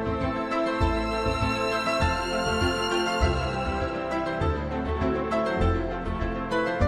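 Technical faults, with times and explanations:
No technical faults are audible anywhere in the clip.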